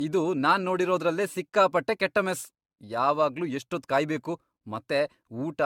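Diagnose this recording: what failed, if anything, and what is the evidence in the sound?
The failure sits at the codec stage: the speech was most likely pushed through a lossy AAC-type encoder and decoded again roughly ten times. Each pass re-quantises on a shifted frame grid, so the errors stack into generation loss. Across the whole recording the sound is swirly and hollow, consonant attacks are smeared, and nothing reaches above 17 kHz. That is more damage than a single encode at around 96 kbit/s would produce.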